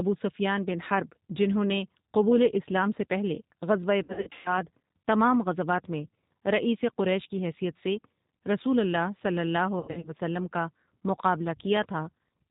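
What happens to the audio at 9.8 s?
Between 9.79 and 10.10 s, right after "رسول اللہ صلی اللہ", the audio breaks up from VoIP packet loss concealed by the speech codec. About 180 ms of audio is missing, scattered over roughly 240 ms, with the longest gap lasting 90 ms. During each gap the decoder keeps repeating its last pitch and vocal-tract shape at falling level. This produces a buzzy tone or coloured noise that fades, not silence. That filled-in, decaying sound is what separates it from a plain dropout or mute. Because each frame builds on the one before, the voice stays weak or distorted for a moment after the gaps end.

The whole clip is also coded with G.729 at 8 kbit/s. Each 10 ms frame is rebuilt from a vocal-tract filter, a pitch predictor and a few pulses, and nothing above 4 kHz passes. The resulting narrowband, slightly synthetic roughness runs through this moment too. It differs from the concealment because it stays steady rather than breaking into fading buzz.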